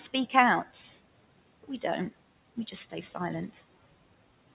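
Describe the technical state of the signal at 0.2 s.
At 0.2 s, noise suppressor artifacts are present, as throughout the clip: steady room noise is cut by about 18 dB frame by frame, so it sinks between words and rises under them. A spectrogram shows a patchy, mottled floor below 4 kHz; the waveform's quiet stretches pump visibly.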